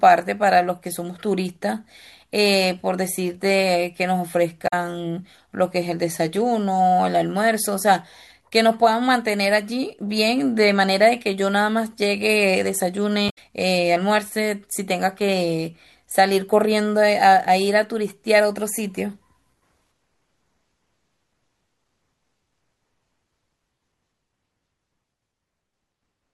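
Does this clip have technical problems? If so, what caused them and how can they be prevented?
Yes. The speech carries two bursts of damaged data in a compressed stream, from 4.64 to 4.73 s and from 13.26 to 13.38 s. At each point, corrupted or missing bytes left the decoder unable to read its frames, so it lost sync and hunted for the next valid frame header. That comes through as a brief chirp, squawk, click or short hole of about a tenth of a second. Protecting the stream with checksums and retransmission, or storing it with verified copies, would prevent this.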